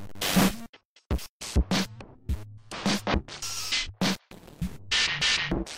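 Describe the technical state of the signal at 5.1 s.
At 5.1 s the audio is intact, with no fault present at that moment.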